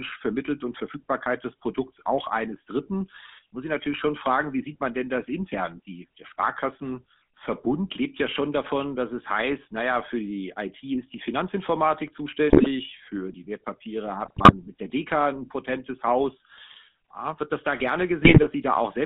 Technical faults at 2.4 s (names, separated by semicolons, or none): GSM full-rate codec